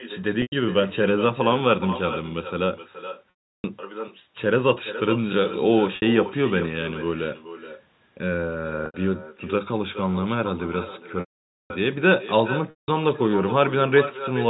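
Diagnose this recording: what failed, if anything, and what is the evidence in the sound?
Echo with no canceller, at the call-processing stage. Each phrase is followed by a thinner copy roughly 0.4 s later, about 12 dB quieter. The far end's loudspeaker feeds its microphone, and nothing cancels the returning signal.

Packet loss with pitch repetition, at the network stage. Gaps begin at 0.42, 3.3, 5.96, 8.86, 11.2 and 12.7 s, lasting 100, 340, 60, 80, 500 and 180 ms. Short ones sound like a buzzy held tone. The 340 and 500 ms gaps fade to silence before the speech cross-fades back.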